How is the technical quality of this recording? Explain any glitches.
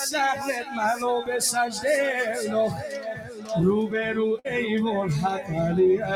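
The recording has clear technical problems. A speech-style noise suppressor is working on the whole clip, two passages are cut by it, and there is one dropout from lost packets.

Throughout, a noise suppressor was left on for material that is not speech. It treats steady tones, ambience and decay as noise. Level swings by roughly 10 dB, so held sound and tails sink and pump while attacks pass through.

From 0.6 to 0.78 s and from 2.94 to 3.51 s, the sound is cut by the noise suppressor. It dips about 6 dB, then about 9 dB. The suppressor judged these stretches to be noise. They sink in level.

At 4.39 to 4.47 s there is a burst of packet loss. The receiver filled 51 ms by extending the last sound and fading it, which gives a brief, fading fill. Playback then resumes with about 60 ms of audio missing.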